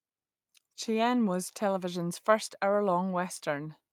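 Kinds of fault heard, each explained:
No kinds of fault are heard in this speech.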